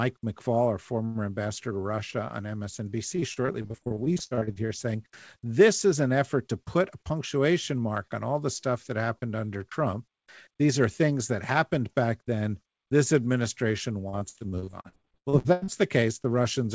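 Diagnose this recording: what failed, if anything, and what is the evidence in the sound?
Network stage: repeated packet loss (robotic sound) at 3.16–4.71 s and 14.09–15.70 s, with about 29% and 41% concealed and gaps up to 37 ms and 93 ms. Each hole is patched by repeating the last sound, giving choppy speech with pieces missing. On a spectrogram this shows as smeared, repeated frames, and the waveform has chopped envelopes.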